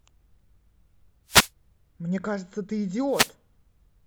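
A short swish of static breaks over the speech from 1.27 to 1.50 s and again from 3.10 to 3.32 s, each about 0.2 s long. These are wireless microphone noise hits: the FM radio signal dipped as reflections cancelled, letting receiver noise rise over the speech.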